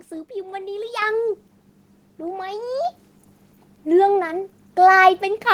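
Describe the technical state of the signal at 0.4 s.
At 0.4 s the speech signal is intact, with no dropout, clipping, distortion or other fault at that moment.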